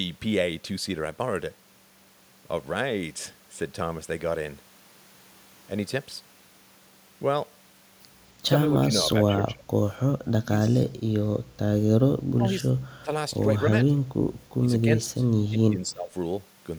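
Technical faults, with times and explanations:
8.72–9.64, 10.43–10.98, 12.33–13.1, 13.71–14.11 and 15.0–16.12 s, speech suppressed in double talk: the speech dips by roughly 10 to 20 dB in short patches, likely the echo canceller ducking it while the far side talks.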